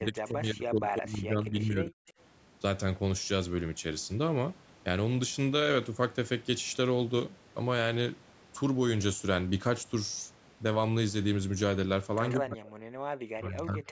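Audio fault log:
0.0–2.1 s, 12.38–12.81 s, 13.36–13.9 s: speech suppressed in double talk. The voice dips by up to about 40 dB, likely because the echo canceller ducked both overlapping talkers.
2.08–2.12 s, 12.30–12.35 s, 13.35–13.39 s: echo leak. Brief scraps of the voice return 134 ms late, about 15 to 35 dB below the speech, likely as loudspeaker pickup slipped past cancellation.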